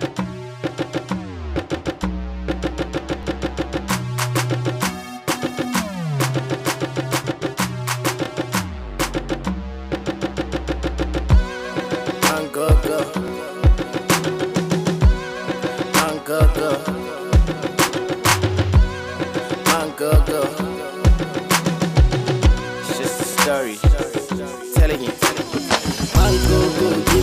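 Overlapping chunks cause a brief stutter at 3.23, 8.26, 13.28, 18.31 and 23.33 s, a steady 5-second spacing. Each chunk begins about 25 ms before the previous one ended, so that sliver of sound plays twice and the join clicks. On a waveform, each point shows a short repeated segment with a discontinuity at its edge. A spectrogram shows a thin vertical line of broadband energy at each join.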